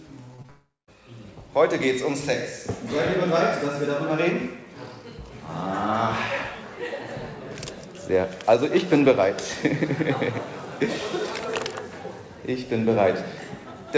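Three short concealed packet losses come in quick succession near the start, at 0.36 to 0.40 s, 0.42 to 0.46 s and 0.46 to 0.50 s, each covering about 20 ms of audio that arrived too late to decode. The receiver bridged each gap by extending the preceding sound, pitch-based where it was tonal and as shaped noise where it was not, then crossfaded back to real audio. The result is a rapid cluster of small smears and wobbles.

The third loss runs straight into a long network dropout from 0.50 to 0.89 s, most likely an interruption in packet arrival. Roughly 380 ms of audio is missing. The receiver first stretches the last sound into a fading buzz or hiss, and the final 190 ms or so is silence. Audio then resumes with the lost section simply absent. Throughout, the G.722 call path leaves nothing above 8 kHz.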